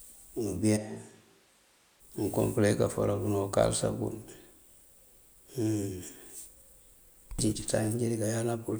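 From 0.78 to 1.99 s the speech abruptly turns hollow and roomy, about 5 dB quieter and noisier, likely a switch to a distant microphone.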